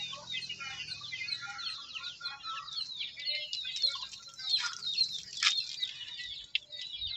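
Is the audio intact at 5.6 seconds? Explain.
No. At 5.6 seconds the audio sits inside a stretch of pre-emphasis left on, running from 3.35 to 5.84 s. The treble was boosted, likely along a 50 µs FM curve, and never cut back. Highs stand about 10 dB too strong at 10 kHz. The sound turns thin, bright and sibilant.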